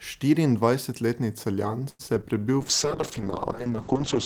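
The whole clip of speech has a grainy, gritty edge on quieter sounds, with a noise floor roughly 45 dB down. That's likely low bit depth without dither, probably rounding to about 10 bits.

From 1.89 to 2.24 s there's repeated packet loss, with robotic sound: four holes, the longest about 99 ms, get patched by stretching earlier audio, so it turns choppy with pieces missing.

At 2.35 to 2.52 s a jitter buffer slow-down repeats bits of the audio to rebuild its reserve, so things drag to about 84% speed without any pitch change.

From 2.61 s to the end a call bitrate drop makes everything rough and muffled, with the top end cut off at 8 kHz. That fits the encoder falling from around 32 to 7 kbps.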